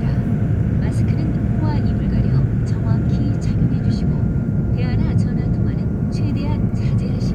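No technical faults can be heard anywhere in this audio, so there is nothing to place in time order.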